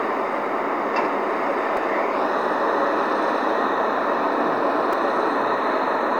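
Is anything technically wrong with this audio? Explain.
Yes. At 1.77 s and 4.93 s, a repeated buffer: late data made the device replay a 5.3 ms block (which fits a 256-sample buffer), heard as a brief click.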